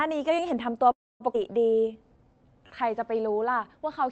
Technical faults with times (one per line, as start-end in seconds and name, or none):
0.91-1.23 call audio freeze
1.32-1.37 skip ahead
1.74-2.76 jitter buffer slow-down